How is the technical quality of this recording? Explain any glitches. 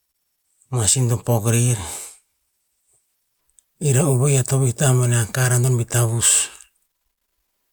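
The technical quality of this recording is sound, with no glitches to explain.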